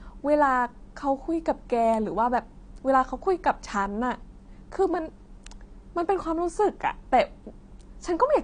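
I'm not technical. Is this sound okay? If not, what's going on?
No. AAC compression, throughout the clip: the speech sounds dull and smeared, with a watery, fizzy edge on hissing sounds, and nothing above 9.7 kHz. This is likely from saving the file at a low quality setting, which trims the highest frequencies and roughly approximates the rest.

Electrical switching spike, at 1.94 s and 5.47 s: each is a sharp, very brief snap sitting on top of the speech. These likely come from a nearby switch, motor or static discharge whose tiny electrical spark was picked up by the audio cable.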